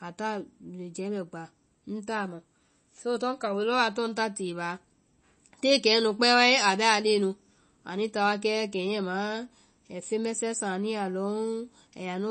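Speech throughout, with plainly audible MP3 compression damage: nothing above about 8.3 kHz, plus watery, swirly artefacts as weak frequency lines drop in and out between frames. That's likely a starved encoder, which fits a low bitrate around 32 kbps.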